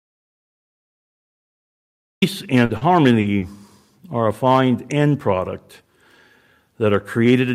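The speech opens inside an audio dropout to silence that runs from 0.00 s to 2.22 s. The input was likely lost, through a disconnected device, a failed link or a mute, while recording carried on writing nothing. Unlike a quiet pause, the gap holds no room tone or noise floor at all: the track is dead until the speech cuts in at 2.22 s, and whatever was said before then is not recoverable.

Shortly after, from 2.65 s to 3.44 s, comes repeated packet loss (robotic sound). Four separate holes fall within under a second, the longest 40 ms, and each is patched by extending the sound just before it. Together the patches fill 160 ms, a fifth of that stretch, and only around 70 ms of it resembles what was lost. The result is choppy speech with pieces missing. That marks it apart from the opening dropout, which is one clean stretch of silence with no concealment.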